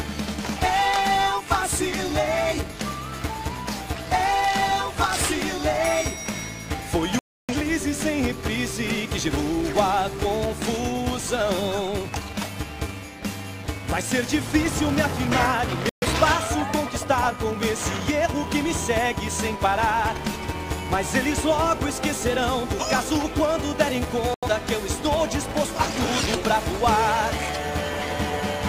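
From start to finish the filter restarts on every block. Each block begins from a blank state, leaving a small transient that forms a 375 Hz buzz, consistent with a 128-sample block at 48 kHz. The buzz rises and falls with the sound's level. A spectrogram shows evenly spaced vertical tick lines and a harmonic ridge at 375 Hz.

Digital broadcast dropouts occur at 7.19–7.54 s, 15.89–16.07 s and 24.34–24.48 s. The receiver mutes when frames arrive corrupted or missing, so the sound vanishes and then resumes further along, with roughly 0.3 s, 0.13 s and 0.09 s of material lost. The waveform shows flat gaps, and the spectrogram shows blank vertical bands.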